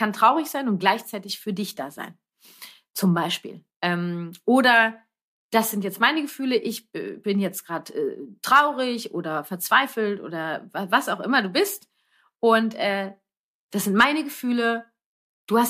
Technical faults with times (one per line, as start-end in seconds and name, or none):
none